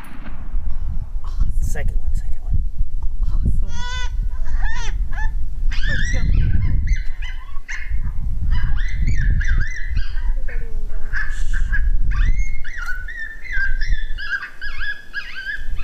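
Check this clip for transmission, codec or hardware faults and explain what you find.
Nothing stood out on listening that would point to a transmission, codec or hardware fault.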